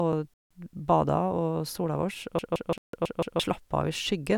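At 0.34 s the speech drops to silence for 0.17 s, resuming at 0.51 s. This is likely a Bluetooth stall, where delayed packets starved the headphone buffer. The waveform shows a flat gap, and the spectrogram shows a clean vertical blank band.

From 2.39 to 3.40 s a system hang loop repeats one 0.17 s slice five times at about 5.9 Hz. That fits an 8192-sample ring buffer cycling while the system froze. It sounds like a machine-gun stutter, and roughly a second of speech is lost. The waveform shows identical repeating blocks, and the spectrogram shows a copied pattern tiled across the stretch.

Inside that loop, from 2.78 to 2.93 s, a 0.16 s silent gap again points likely to a Bluetooth stall, showing as another flat, empty strip.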